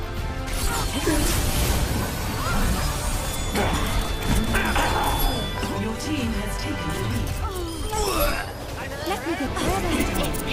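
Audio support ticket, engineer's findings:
Feedback whistle, 3.13 s to 5.64 s. Thin steady tone at 3.5 kHz behind the sound, around 15 dB below it, swelling and fading slowly in level, not building. Likely loudspeaker-to-microphone acoustic loop sitting just at the edge of instability, sustaining one frequency without running away. Check monitor placement, mic gain, and any notch filtering near 3.5 kHz.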